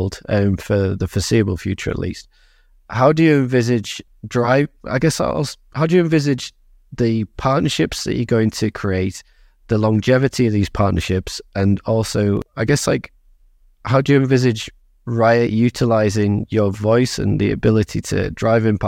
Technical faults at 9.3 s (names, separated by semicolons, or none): none